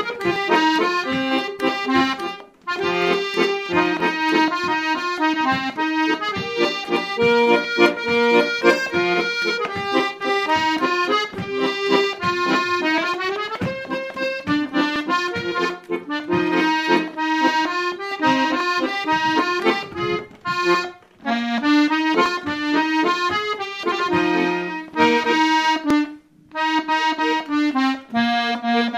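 Clock drift buffer slips recur from 0.36 s to 25.9 s as a short click or pop roughly every 3.65 s, about seven in all, spaced like a metronome whenever sound is present. The likely cause is two devices running on independent clocks that disagree by a few hundred parts per million. The buffer between them gradually overfills or drains, and at each slip a block of several dozen samples is dropped or repeated, breaking the waveform's continuity.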